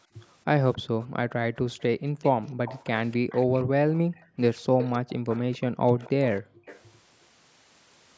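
From 0.73 to 1.07 s, a faint echo leak trails the speech by about 272 ms, most likely from a far-end loudspeaker whose echo canceller missed part of the pickup. It is a distinct delayed copy, not room reverb smearing the original. Overlapping it, from 0.82 to 2.13 s, the background is gated by the echo canceller: the room tone drops by up to about 40 dB for roughly half a second in total. From 1.79 to 6.11 s the echo leak returns louder, still 272 ms behind, sitting roughly 15 dB below the speech. Between 3.65 and 4.15 s, and again from 6.42 to 6.66 s, the background is gated again. These dips are briefer, a few hundred milliseconds each. Then from 6.66 to 6.9 s a last short scrap of the same 272 ms echo appears, moderately quiet.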